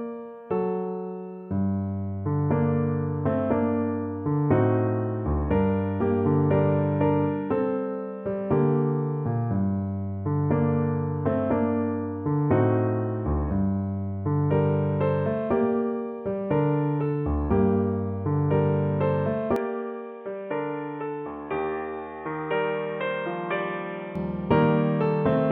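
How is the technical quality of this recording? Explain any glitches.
The recording has one clear fault, a change of input lasting several seconds. From 19.56 to 24.16 s, an input switched to a poorer device likely explains the sound turning dull and a few decibels quieter, with nothing above 3.8 kHz and a faint new noise floor. A spectrogram shows the upper band cut flat across that stretch. The waveform drops slightly in height, with no gap at either switch.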